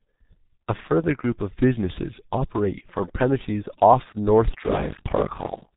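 The whole clip runs through a G.723.1 codec, and it's doing a lot of harm here. Nothing gets through above about 3.8 kHz, so the speech sounds muffled, and the coarse 30 ms framing with its slow-moving voice model leaves it hoarse, with consonants smeared together. The heavy damage fits a bitrate down around 6 kbit/s.

From 4.61 s to the end there's buffer tearing on top. The writer and the hardware reader of the ring buffer have drifted until they cross inside every period. Around two-fifths of each buffer ends up holding audio from about 40 ms earlier, with hard joins on both sides of that stale chunk. You hear it as a steady robotic buzz at about 47 Hz, which fits a 1024-sample buffer, and it's only there while sound is playing.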